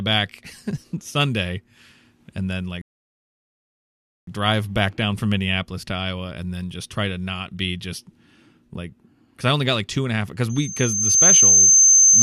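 A rebuffering stall runs from 2.82 to 4.27 s. After "and then" the speech drops to silence for about 1.46 s because the player has used up its downloaded audio, then picks up exactly where it halted with "drive back down from", losing nothing but adding time.

A loudspeaker feedback squeal starts at 10.49 s, just after "and a half because", and lasts to the end at 12.22 s. The microphone is re-capturing its own loudspeaker, and at 6.3 kHz the loop gain exceeds one. That tone swells over roughly 0.7 s into a piercing whistle about 10 dB above the speech.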